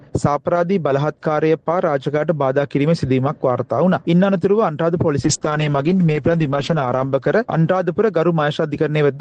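From 5.25 to 8.21 s a call bitrate drop turns the audio rough and muffled, fitting roughly 32 to 9 kbps, and the spectrogram's top edge falls from 12 kHz to 8 kHz.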